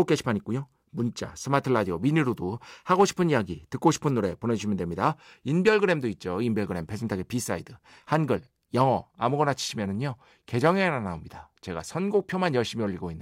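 Nothing technical stands out in this speech recording; there are no faults to point to at any moment.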